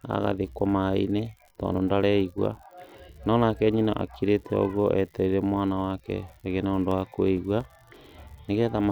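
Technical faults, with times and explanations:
Throughout, unreliable data bit: one line in the digital path is marginal, so a single bit of the sample value flips at random. Each flip adds a spike of identical size, heard as a steady crackle and fizz that continues through the pauses in the speech.
6.91 to 8.29 s, CD scratch ticks: just after "wake agĩe na ũndũ", a blemish on the disc destroys more data than error correction can rebuild on each rotation. The player patches or mutes those samples, giving seven regular ticks, the longest lasting a few milliseconds.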